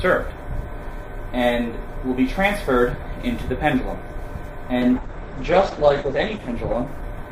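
From 4.83 s to the end, the sound turns rough, watery or muffled, with everything above about 8 kHz gone, and it never clears before the clip ends. This is a call bitrate drop: the bandwidth estimate fell, forcing the encoder from 128 kbps down to 10 kbps, where it stays for 1.19 s. At so few bits Opus codes far more coarsely and narrows its audio bandwidth from 20 kHz to 8 kHz.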